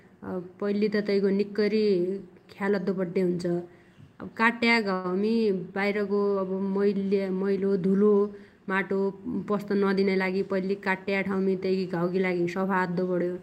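At 4.93 s there's a call audio freeze of about 0.1 s, a brief fading buzz or hiss, likely packets stalling and the jitter buffer running dry, with nothing lost. Then, between "माटो पस्त" and "पैल्ली काट्ट्या ठाउमी तैगी", a jitter buffer speed-up from 10.03 to 10.48 s trims roughly 50 ms, running about 9% fast at unchanged pitch.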